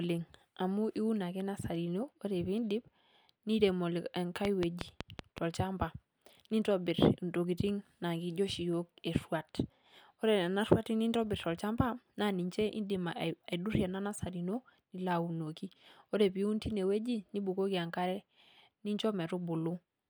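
From 4.45 to 5.39 s there's a train of clicks: about seven evenly spaced pops at 5.4 per second, standing well above the speech. Near-identical pulses at a steady pace like this are likely interference from nearby gear or a faulty connection or power supply.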